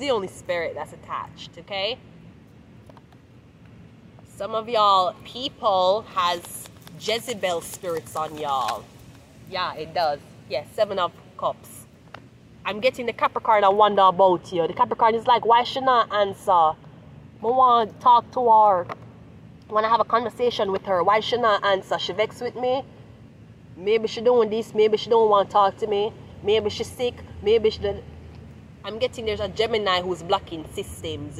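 Nothing in this audio stood out as a technical problem on listening.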